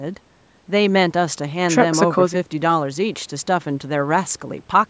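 Speech, with no audible faults.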